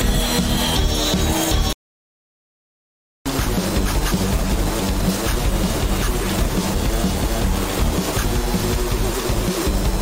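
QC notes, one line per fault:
1.73–3.26 s, playback stall: output drops to silence for about 1.5 s, likely a starved player buffer; the waveform flatlines and the spectrogram shows a blank vertical band.
6.74 s, damaged data in a compressed stream: the decoder misreads a corrupt frame and produces a brief blip, seen as a thin broadband streak on the spectrogram.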